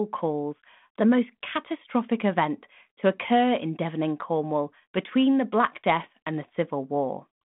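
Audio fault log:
No faults heard anywhere in this speech recording.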